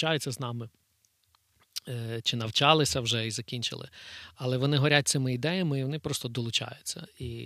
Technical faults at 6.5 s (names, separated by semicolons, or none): none